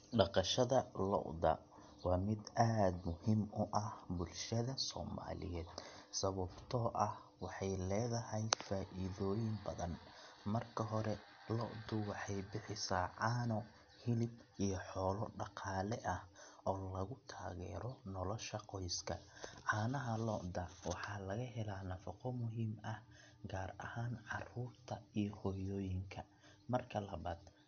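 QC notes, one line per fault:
Throughout, MP3 compression: nothing is left above about 6.5 kHz, so the speech sounds dull and boxed in. The s sounds come out smeared and metallic, and a watery swirl runs under the voice. This is likely from an MP3 encoder starved of bits, which fits a low rate of around 48 kbps. It cut the treble off at a fixed point and dropped weak frequency detail that flickers on and off from frame to frame.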